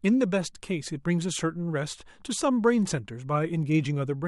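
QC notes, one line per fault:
No faults heard in this speech clip on review.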